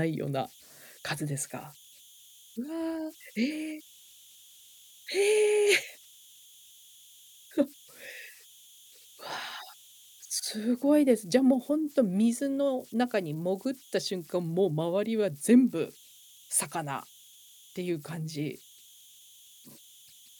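Throughout the recording, the delta-sigma converter runs without dither, so whenever the speech level drops low its modulator settles into repeating bit patterns instead of spreading its error as noise. These converter idle tones sit about 28 dB below the signal, with energy around 3 kHz. In the pauses they come through as a high whistle, and under quieter passages of speech they leave a grainy, gritty texture.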